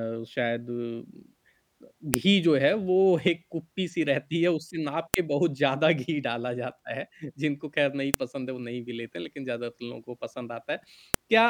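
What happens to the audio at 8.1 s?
At 8.14 s there is a sharp, loud click. This is a file header played as audio. The speech arrives as separate WAV pieces, here 3.0 s long, joined without stripping their headers. The header bytes at the start of the new piece are read as sample values. Those values bear no relation to the speech around them, so the waveform jumps abruptly. The result is a brief snap that cuts through the audio regardless of what is being said.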